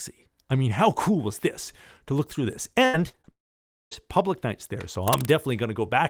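A speech clip with three technical faults. From 2.85 to 3.29 s, repeated packet loss causes a choppy, robotic sound. Five gaps, the longest 79 ms, are patched by repeating audio, covering about 41% of that stretch. From 3.31 to 3.93 s, the sound smears briefly, then goes silent for about 0.57 s. A long network dropout is the likely cause, and that audio never returns. From 5.03 to 5.36 s, a scratchy, rustling burst sits roughly 10 dB below the speech. It is likely cable scratch noise from a worn connector or cable.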